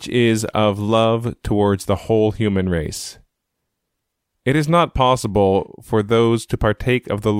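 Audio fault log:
No technical faults are audible in this speech clip; the signal holds steady throughout with no interruptions, level problems or added disturbances.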